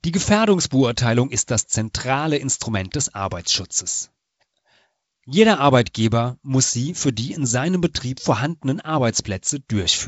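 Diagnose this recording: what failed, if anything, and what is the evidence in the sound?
Nothing failed in this recording: the speech carries the expected light coding hiss and top end of a 56 kbit/s G.722 wideband telephone path, with no audible evidence of any fault.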